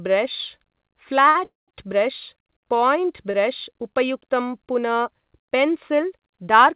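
At 1.29 s the speech briefly sticks: for about 58 ms, until 1.37 s, the last sound is held and carries a faint buzz or dip before the talker picks up exactly where they left off. This is a short stall from a late packet. The jitter buffer ran dry and the receiver stretched the final sound to cover the wait, so nothing is lost.

Just after, from 1.45 to 1.76 s, comes a longer call audio freeze. The sound turns into a fading buzz or hiss, then goes quiet for about 180 ms before the speech resumes from the same point. This was likely caused by packets held up in transit long enough to empty the buffer. The fade to silence and the roughly 230 ms length set it apart from the brief held sound of a stall.

A second short stall at 3.31 s holds the sound for only about 25 ms, ending at 3.36 s. It is a slight smear rather than a gap.

Throughout, the G.711 mu-law call path keeps the audio band-limited with nothing above 4 kHz.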